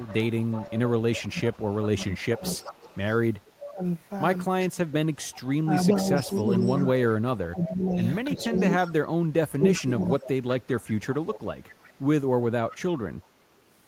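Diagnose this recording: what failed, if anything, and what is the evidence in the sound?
A faint, delayed copy of the speech trails the talker from 0.0 to 3.71 s and again from 4.62 to 13.27 s, arriving 376 ms behind the original and sitting about 15 dB below it. This is echo leak in the call-processing stage. The far end is likely playing the call on a loudspeaker, and its echo canceller is failing to subtract everything its microphone picks up, so the residue returns down the line at a fixed round-trip delay.

The loudspeaker side's speech repeatedly dips and cuts out in pieces between 1.27 and 2.43 s, and again across 3.38 to 10.13 s. The deepest drops reach about 20 dB, totalling roughly half a second in the first span and about two seconds in the second. This is speech suppressed in double talk, again in call processing. The echo canceller is likely unable to tell overlapping talk from loudspeaker echo, so it turns both down.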